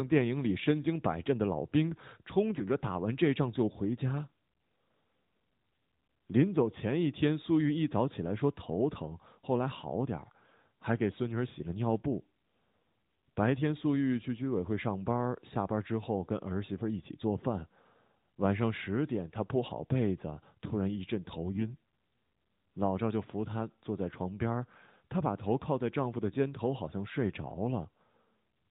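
A speech clip carried over the AMR narrowband mobile codec, so nothing shows above 4 kHz. From 21.55 to 21.71 s, AMR bit errors make the voice briefly hoarse and gargly at roughly unchanged pitch and level, which fits a handful of 20 ms frames with scrambled excitation pulses. On a spectrogram the harmonics smear into noisy, ragged texture; the waveform keeps its envelope but loses regular periodicity.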